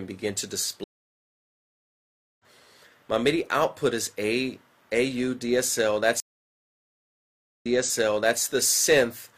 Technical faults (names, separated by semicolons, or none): stream reconnect